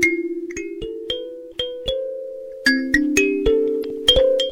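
Damaged data in the compressed stream from 3.80 to 3.85 s makes the decoder lose frame sync, briefly breaking the sound with a glitch.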